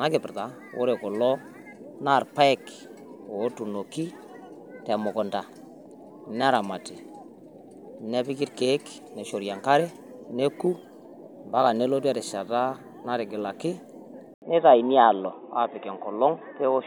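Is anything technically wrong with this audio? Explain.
Yes. At 14.34 s, likely an input switched to a poorer device: an 80 ms waveform gap, then its narrower band leaves the spectrogram empty above 3.8 kHz, sounding boxy.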